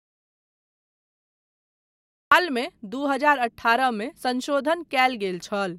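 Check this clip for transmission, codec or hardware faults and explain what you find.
One fault is present: an audio dropout to silence at the very start of the speech. From 0 to 2.32 s the signal is silent, with no room tone or noise floor at all, and the speech enters abruptly at 2.32 s. The gap was already under way when the clip begins. The likely cause is a loss of input, such as a disconnected device, a failed link or a mute, while the recorder kept writing silence. Anything spoken during that span is gone.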